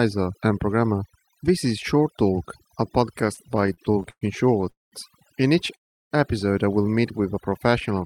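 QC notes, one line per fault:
Throughout: overdone noise removal. The noise reduction was pushed so hard that narrow frequency bands near its noise estimate are pulled far down or shut off entirely. The background drops and breaks up into twinkling specks, and the quieter parts of the speech are stripped away with the noise. Unlike the timing faults below, this is a constant change of tone colour, with no gaps or dragging.
3.21–4.23 s: repeated stalls (stutter). Packets kept arriving late or slower than playback, so the jitter buffer ran dry about fifteen times across this second. Each time the last sound was held and stretched, with the longest wait about 113 ms, for roughly 300 ms of fill in total and close to 29% of the span. Nothing is lost, but the speech catches and drags. It differs from a single freeze because the breaks are many, short and closely spaced.
4.70–4.94 s and 5.76–6.13 s: call audio freeze. 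Each is one continuous stop. The sound trails off into silence for about 170 ms in the first and about 340 ms in the second, then carries on from where it halted, so the speech is pushed later by about 223 ms and 351 ms with nothing cut out. The likely cause is packets held up in transit that emptied the jitter buffer. It is a single clean gap, not the choppy run of the stutter.
7.18–7.72 s: jitter buffer slow-down. To rebuild a reserve the receiver repeated single pitch periods and slivers of pause, adding about 46 ms and slowing playback to 93% speed. The pitch holds steady while sounds become drawn out. There is no silence or break here, which sets it apart from the freezes and stalls. The speech simply runs a little slow.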